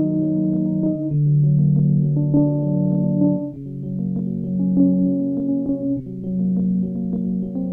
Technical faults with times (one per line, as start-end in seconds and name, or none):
none